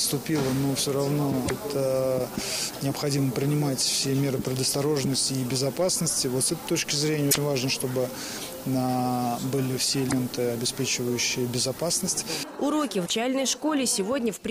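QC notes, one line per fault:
1.43–1.51 s, 7.28–7.36 s, 10.05–10.13 s, 13.02–13.10 s: damaged data in a compressed stream. Each is an 80 ms glitch where corrupted bytes make the decoder misread frames, lose sync and hunt for the next valid frame header before the audio resumes.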